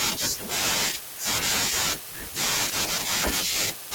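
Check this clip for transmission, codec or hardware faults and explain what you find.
There is one fault in this speech. Block size mismatch (padded) runs from 0.55 s to the end. Each block of audio is shorter than the block the next stage reads, which fits 480 samples written into 512-sample reads, and the shortfall is filled with silence. That repeated gap produces a buzz at 93.8 Hz, and the speech runs at 0.938 of normal speed with its timbre unchanged.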